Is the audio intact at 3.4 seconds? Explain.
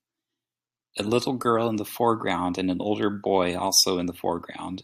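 Yes, the speech at 3.4 seconds is intact, with no audible fault at that moment.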